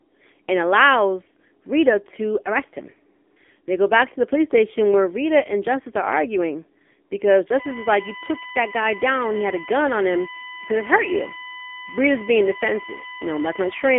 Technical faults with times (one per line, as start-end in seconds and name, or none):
0.00-13.99 AMR narrowband mobile codec